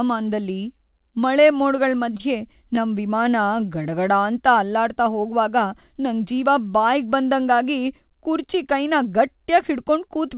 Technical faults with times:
1.48-2.79 scattered short gaps
3.24-4.12 jitter buffer slow-down
6.16-6.46 jitter buffer speed-up

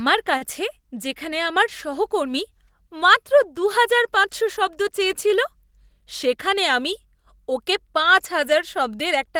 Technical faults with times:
0.37-0.44 short stall from a late packet
6.36-6.93 jitter buffer speed-up

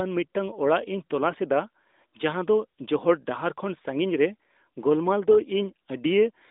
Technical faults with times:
none

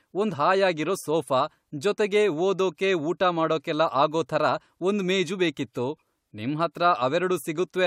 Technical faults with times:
none

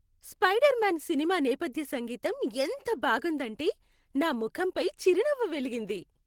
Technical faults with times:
none

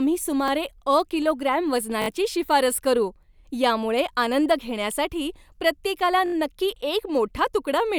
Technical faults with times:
0.48-0.50 repeated buffer
2.02-2.08 repeated buffer
6.26-6.34 repeated buffer

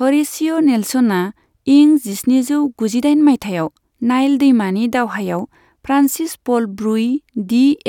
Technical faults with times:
none

